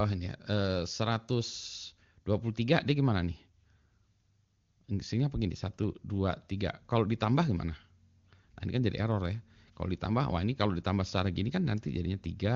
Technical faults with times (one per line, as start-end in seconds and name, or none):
none